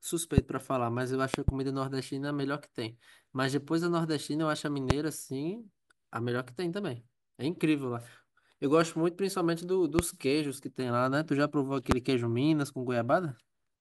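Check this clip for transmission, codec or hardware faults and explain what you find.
There is one hardware-type fault, repeated through the speech. Loud pops at 0.38–0.40, 1.34–1.51 (a double pop), 4.90–4.93, 9.99–10.01 and 11.91–11.94 s come from a sudden voltage pulse, likely from a switch, plug or static, entering the chain. Each is a sharp click some 20 to 25 dB above the speech, which continues underneath.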